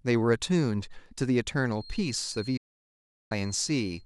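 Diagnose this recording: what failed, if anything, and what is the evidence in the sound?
From 1.68 s to the end, a thin, steady feedback whistle at 4.2 kHz sits roughly 20 dB below the speech, swelling and fading slowly. Its likely cause is acoustic coupling: a loudspeaker-to-microphone loop held just at the point of feedback. A spectrogram shows one horizontal line, broken during the dropout.

A digital broadcast dropout at the receiver mutes the speech from 2.57 to 3.32 s. The sound fades out over 8 ms, stays silent for 0.74 s, then returns. Frames that failed or never arrived were muted and not recovered. The waveform shows a flat gap with a short taper.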